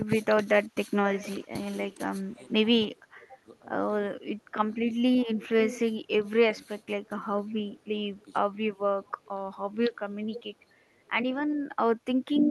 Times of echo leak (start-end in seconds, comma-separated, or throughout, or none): 1.14-3.58, 5.21-6.30, 7.52-11.09